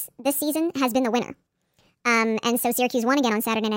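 Audio captured at one rate is being played back at a rate 1.5 times higher, with no conversion between them, a wrong sample rate fault present from start to finish. The ratio fits material recorded at 32 kHz and played at 48 kHz. Because speed and pitch are tied together, the speech runs 1.5 times faster and sits about 7 semitones higher throughout, giving the voice a hurried, chipmunk-like lift.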